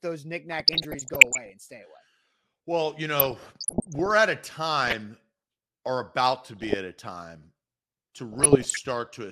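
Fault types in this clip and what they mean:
DAB burbling: weak reception lets bit errors slip past the error correction, so corrupted samples and scale factors reach the MP2 decoder, and individual sub-bands leap in level for up to a frame. The result is burbling over the speech at 0.52–1.52 s before "and stay", 3.20–4.11 s before "at a", 4.88–4.97 s, 6.56–6.74 s after "or about to", and 8.32–8.79 s.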